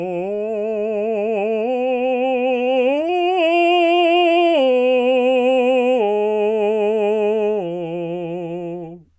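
Nothing goes wrong anywhere in this music, so there are no faults to walk through in time order.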